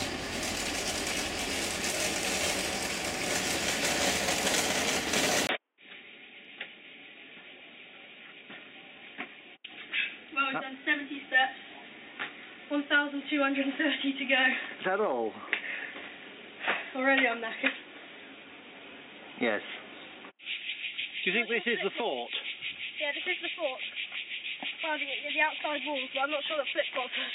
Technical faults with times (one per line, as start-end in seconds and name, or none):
5.47-27.35 input switched to a poorer device